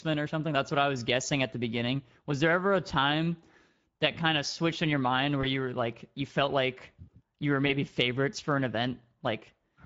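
Speex codec damage runs through the whole speech clip. It sounds hoarse and noisy, which points to a middle setting near 17 kbps.

VoIP packet loss concealed by the speech codec comes at 5.41 to 5.46 s, after "switched in your mind", and at 7.67 to 7.72 s, after "felt like you were". The decoder extrapolated a brief fill, which fits one lost 20 ms frame.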